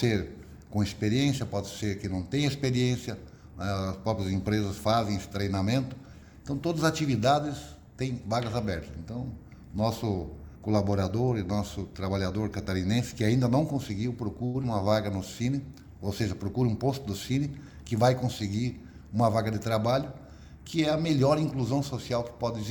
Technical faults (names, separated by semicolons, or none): short stall from a late packet; short concealed packet loss; jitter buffer speed-up